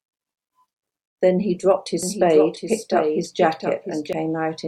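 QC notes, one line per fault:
2.03–4.13 s, doubled audio track: a second copy of the speech, likely from a slower capture path or an edit holding two out-of-step copies, is mixed in alongside the original. It trails by roughly 0.7 s at about 5 dB below the main signal, so every syllable is answered by a full-band repeat with no decay or room colour. The copy appears abruptly at 2.03 s and cuts off just as abruptly at 4.13 s.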